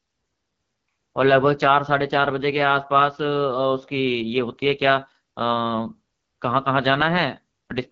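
From start to finish the speech passes through the AMR wideband (HD Voice) codec. The damage is plainly audible: a rough, raspy texture that fits one of its lowest rates, around 8.85 kbit/s. Nothing is heard above 7.4 kHz, and the top band sounds like hiss.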